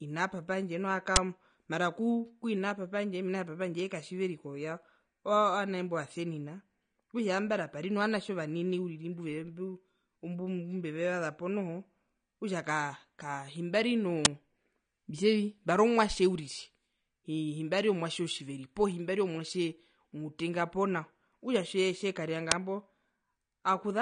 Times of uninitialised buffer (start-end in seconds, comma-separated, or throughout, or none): 1.16, 14.25, 22.51